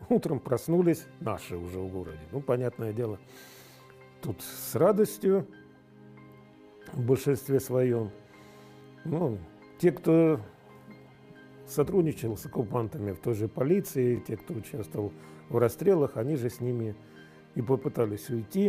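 A stutter-click recurs at 2.09–2.11, 5.11–5.13, 8.13–8.15, 11.15–11.17, 14.17–14.19 and 17.19–17.21 s. These are overlapping chunks: the audio was handled in 3.0 s blocks, and each block starts before the previous one finished, so 20 ms of sound replays at every join. A waveform shows a short repeated segment with a step discontinuity at each seam. A spectrogram shows thin vertical broadband lines at these evenly spaced points.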